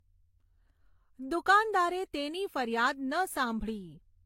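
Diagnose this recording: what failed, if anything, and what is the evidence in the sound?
The codec stage failed across the whole speech clip, with transcoding between lossy codecs the likely cause. The sound carries two layers of coding damage at once: the smeared, swirly high end typical of a low-rate HE-AAC encode, which fits something near 32 kbit/s, overlaid with the grainier pre-echo and tonal warble of a Vorbis pass, which fits roughly 59 kbit/s. On a spectrogram, energy stops flat at 16.3 kHz and the top band shows blotchy, patchy texture. The second encoder spent its bits re-encoding the first one's artefacts.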